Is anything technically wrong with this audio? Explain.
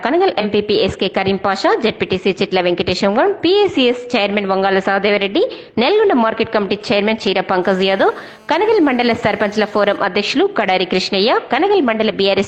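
Yes, there are two faults.

From 0.40 to 0.44 s there is AAC frame loss with concealment. About 43 ms, consistent with one lost frame, is patched from the previous spectrum, giving a brief smeared, noisy blur that shows as a smudged vertical strip on the spectrogram.

From 7.63 to 9.98 s there is a GSM phone buzz. A nearby phone on a call transmits bursts that get rectified into a steady raspy buzz at 217 Hz, about 29 dB below the signal. On the spectrogram it appears as evenly spaced horizontal harmonic lines, and the waveform shows regular pulses.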